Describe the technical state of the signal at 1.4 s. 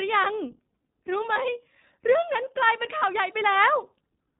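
At 1.4 s the audio has just recovered from lost iLBC frames between 1.34 and 1.38 s. The decoder repeated the last pitch cycle with added noise, producing a brief buzzy, held vowel. On a spectrogram this shows as frozen, smeared harmonic striations, and the waveform shows a repeating cycle before normal detail returns.

The iLBC codec also runs throughout. It is a narrowband coder, so the spectrogram is empty above 4 kHz, and the sound is plainly rough and synthetic. The frame rhythm fits 20 ms frames.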